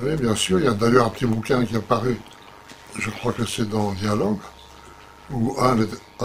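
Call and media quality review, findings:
Metallic buzz riding on the whole clip, start to end, with added tones flanking the sound. Level pumps at around 100 Hz, depth about 11 dB. Probable component: frame-based processing stage, overlap-add resynthesis. Mechanism: window overlap not summing to constant gain, so level swells and dips once per frame. Frame rate this fast, which points to short frames, turns the dips into buzz rather than tremolo.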